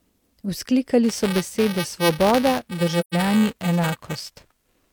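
From 1.03 s to the end of the speech, buffer tearing produces a steady robotic buzz near 345 Hz, which fits a 128-sample buffer. A small slice of each period, a few percent, replays audio about 10 ms old. Unlike mains hum, the buzz is present only while there is sound.

From 3.00 to 3.14 s, AAC frame loss with muting leaves a 128 ms silent hole, which fits three lost frames. The overlapping windows fade the sound out and back in, so it has soft edges, unlike a hard dropout.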